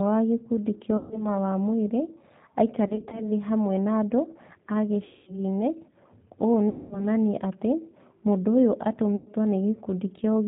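Throughout, the speech carries the sound of the G.729 codec, plainly audible at 8 kbit/s. The decoder rebuilds each 10 ms frame from a vocal tract filter, a pitch predictor and a handful of pulses, so the voice comes out slightly rough and synthetic, and nothing above 4 kHz survives.

Five episodes of VoIP packet loss concealed by the speech codec follow. At 0.97 to 1.30 s, about 140 ms of audio is missing. The decoder extends its last pitch and filter settings with falling gain, so the sound smears into a buzzy tone or coloured noise that fades, and stays weak for a moment after the stream resumes. From 2.88 to 3.27 s, roughly 100 ms is lost in short gaps spread over 240 ms, none longer than 20 ms, which fits single dropped packets. The longest gaps come at 5.05 to 5.41 s and at 6.69 to 7.05 s, each about 220 ms of missing audio, where the extrapolated sound decays audibly toward silence before the speech recovers. 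At 9.16 to 9.31 s, a further 100 ms loss produces a shorter concealed patch.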